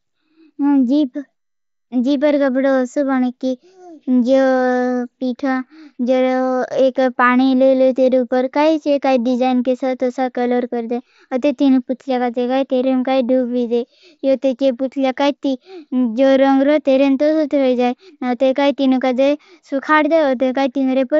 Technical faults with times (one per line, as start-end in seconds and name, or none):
none